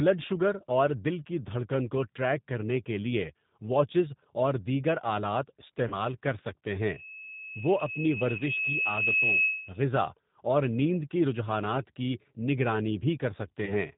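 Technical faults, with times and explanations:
throughout G.729 codec: the speech was squeezed through a low-rate vocal tract and pulse model that discards everything above 4 kHz and fits an 8 kbit/s G.729A stream, so it sounds muffled, roughened and plainly synthetic.
5.88 to 5.96 s, 8.38 to 8.43 s, 13.65 to 13.74 s VoIP packet loss concealed by the speech codec: gaps of 40 ms, 20 ms and 20 ms were filled by the decoder stretching its last pitch and filter at falling gain, giving brief buzzy or noisy fading smears that leave the speech weakened or distorted just afterwards.
6.79 to 9.90 s loudspeaker feedback squeal: a microphone picked up its own loudspeaker and the loop gain passed one at 2.6 kHz, so a single tone swells over about three seconds to roughly 5 dB above the speech.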